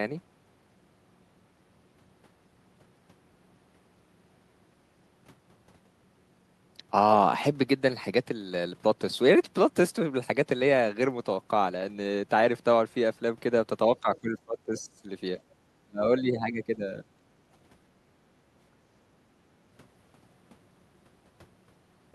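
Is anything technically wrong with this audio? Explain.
Yes. Between 14.01 and 17.07 s, speech suppressed in double talk: the echo canceller likely mistook the talker for loudspeaker echo and turned the speech down. It dips by up to roughly 35 dB at 15.85–16.03 s, with shallower dips at 14.01–15.01, 16.21–16.82 and 17.02–17.07 s.

At 15.46–15.57 s, background gated by the echo canceller: the canceller clamped the microphone while the loudspeaker played, so the room sound drops about 10 dB for a tenth of a second.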